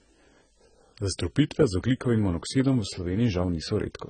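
Heavy AAC compression, likely at a very low bitrate around 16 kbps, strips this speech of everything above 9.1 kHz throughout, leaving it dull, smeared and fizzy.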